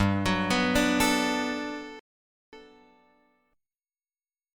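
At 1.99 s a rebuffering stall drops the sound to flat silence until 2.53 s, adding about 0.53 s. Playback ran dry, then resumed exactly where it stopped: a blank gap in waveform and spectrogram alike.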